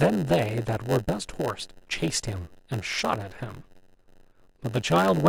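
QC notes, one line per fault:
Throughout: block size mismatch (padded). Zero-filled gaps in every block leave a buzz near 92 Hz, and the speech drags to about 0.92 speed with its timbre intact.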